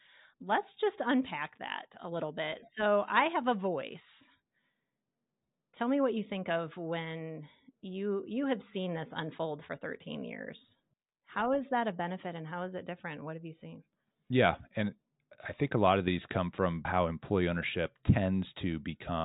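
A speech recording, and nothing is technically wrong with it.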